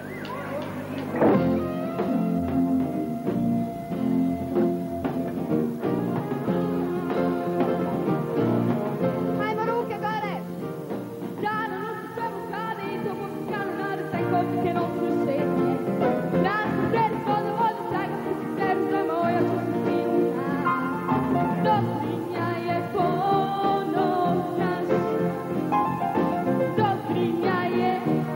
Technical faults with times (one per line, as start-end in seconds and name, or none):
none